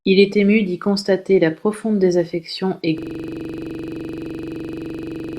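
At 2.98 s, after "la profonde désaffection et", a system hang loop replays one frozen 43 ms buffer at 23.4 Hz, a harsh stutter lasting to the end.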